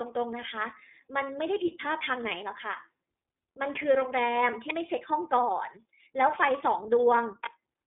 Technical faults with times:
0.00-7.87 iLBC codec

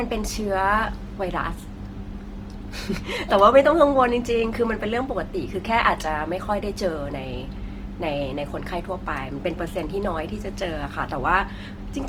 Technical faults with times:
0.00-12.09 Opus compression

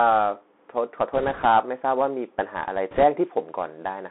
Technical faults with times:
0.00-4.11 Bluetooth CVSD headset codec
1.13-1.46 bit errors on a Bluetooth voice link
2.91-3.03 bit errors on a Bluetooth voice link

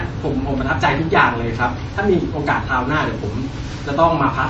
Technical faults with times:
0.00-4.50 MP3 compression

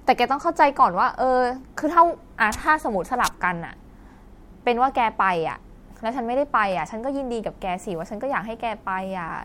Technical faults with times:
none

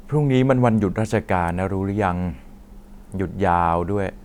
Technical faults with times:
1.48 electrical switching spike

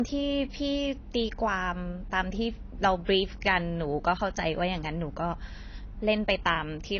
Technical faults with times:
0.00-6.99 low-bitrate audio saved at a high bitrate

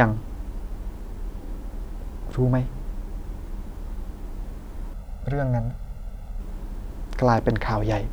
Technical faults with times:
4.93-6.40 channel delay (comb filtering)

